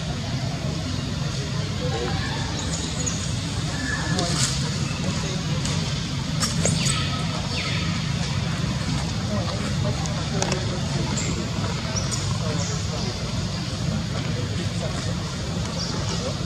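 Nothing in the audio stood out as a problem on listening.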